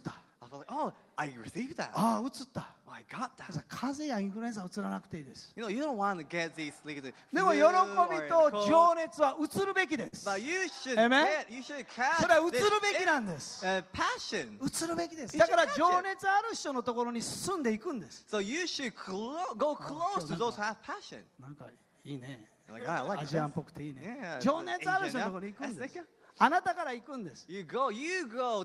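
A short stall from a late packet appears between 10.07 and 10.14 s: the last sound is held for 50 ms with a faint buzz or dip, then carries on from exactly where it stopped. Unlike a packet-loss gap, nothing is skipped; the audio just falls 50 ms behind. From 14.50 to 15.73 s a jitter buffer speed-up takes back that backlog. The receiver trims pitch-period-sized slivers in quick succession, so the audio runs at 104% speed and sheds about a twentieth of a second. Pitch stays unchanged, which separates this from a resampling or clock error, where pitch would rise along with tempo.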